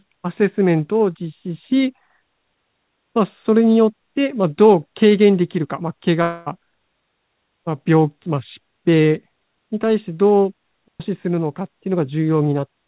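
From 6.22 to 6.48 s the sound turns into a smeared, fading buzz that stretches the last moment for about a quarter of a second, and the audio resumes with that stretch missing. This is likely a long network dropout: packets stopped arriving and the receiver filled the gap by extending what it last had.

At 7.04 to 7.35 s, and again at 10.88 to 11.00 s, the sound drops into clean near-silence for about 0.31 s and then 0.12 s, with no noise burst at either edge. Both are digital wireless dropouts, where the link lost too much data and the receiver briefly muted.

Throughout, nothing is heard above 4 kHz, which fits the G.711 mu-law codec on the WebRTC call path.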